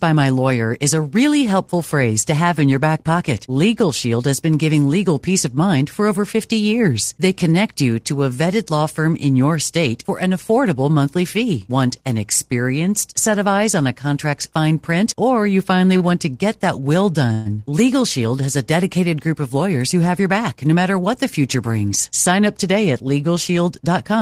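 At 15.97 s, just after "print or you finally", a late packet caused a short stall. The packet had not arrived when it was due, so the jitter buffer ran dry and the receiver stretched the last bit of sound for about 27 ms until the packet turned up. Playback then resumed from the same point, so nothing is lost, but the sound is held a little too long with a faint buzzy smear, and everything after sits about 27 ms later.

From 17.33 to 17.48 s, right after "get that will", there is a call audio freeze, likely from packets held up in transit that again emptied the jitter buffer. For about 127 ms the receiver filled the gap by continuing the last sound as a fading buzz, which never drops to full silence. When the packets arrived, the audio picked up exactly where it had stopped. The result is an inserted pause with nothing missing, pushing the rest of the clip a further 127 ms late.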